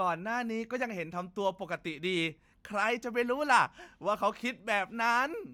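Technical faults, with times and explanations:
No technical faults are audible anywhere in the speech.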